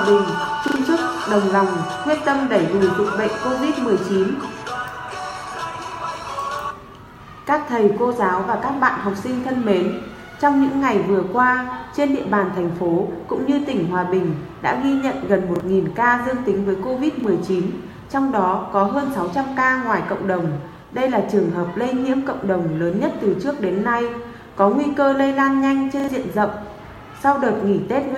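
At 0.68 to 0.76 s there's a repeated buffer: new audio didn't show up in time, so a piece about 40 ms long gets played twice more, with a hard join at each repeat, heard as a quick stutter. The same thing happens with a single repeat at 15.56 to 15.6 s and 17.2 to 17.24 s, then with a double repeat again at 26.0 to 26.08 s. Each double repeat drops roughly 70 ms of real audio, and each single one about 40 ms.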